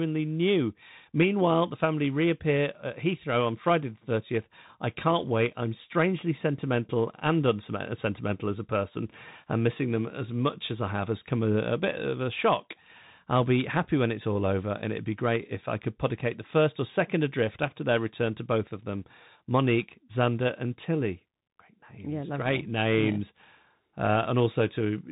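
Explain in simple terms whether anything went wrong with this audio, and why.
Something did go wrong, and it lasts the whole clip: the speech has gone through the Bluetooth CVSD headset codec, the old phone-quality link many wireless headsets fall back to. Nothing above about 3.8 kHz survives, so the voice sounds boxed-in and thin. The codec tracks the waveform in tiny up-or-down steps, and sharp, bright sounds outrun those steps. S sounds come out scratchy, and a grainy hiss sits under the talking from start to finish.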